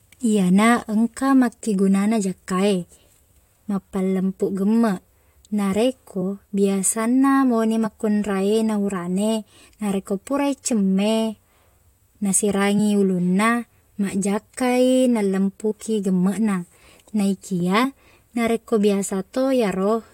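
At 7.85 s, just after "biasanna mauni", and again at 15.70 s, compressed frames are skipped: about 20 ms, then about 40 ms, of speech vanishes and the decoder jumps ahead. Each join is seen as a brief discontinuity in the waveform and spectrogram.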